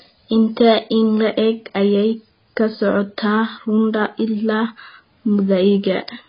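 Throughout, the speech carries heavy AAC compression damage, likely low-bitrate AAC-LC near 16 kbps: there's nothing above 5 kHz, so it sounds dull and smeared.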